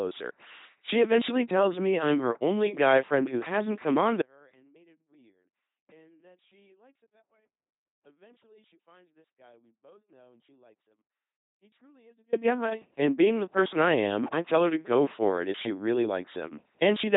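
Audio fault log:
Throughout: LPC-10 vocoder. The speech has that buzzy, robotic character you get when every instant is rebuilt from a ten-pole vocal tract filter fed by either a pulse train or noise, with nothing in between. Where the voiced/unvoiced call goes wrong you hear buzz on hissy sounds or hiss on voiced ones. The damage is heavy, nothing comes through above 3.9 kHz, and it all fits a 2.4 kbit/s LPC-10 coder.
4.22 to 12.33 s: audio dropout to a faint residue. Right after "who hasn't come on" the speech cuts out abruptly, not a pause or a fade, and for about 8.1 s all that's left is a faint sound sitting roughly 35 dB below the normal level. It snaps back just before "guy and being the". That faint residue means the path downstream stayed live while the wanted signal was lost, likely a break upstream rather than a muted channel.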